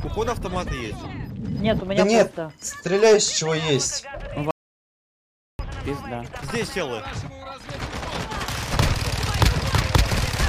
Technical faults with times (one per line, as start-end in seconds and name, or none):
4.51-5.59 audio dropout to silence